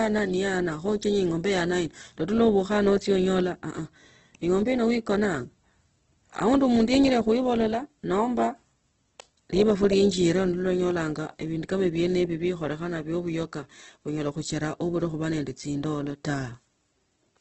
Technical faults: Opus compression

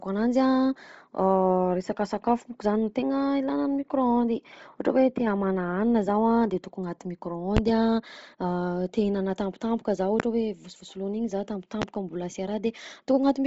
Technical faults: Bluetooth LC3 compression; loud pop

